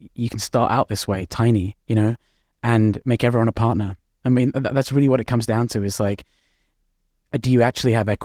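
No faults; the speech shows only the light coding texture of Opus voice compression, with full bandwidth retained.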